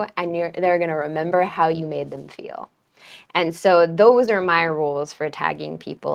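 Nothing in this stretch of speech stands out as a technical fault; there's no problem here to point to.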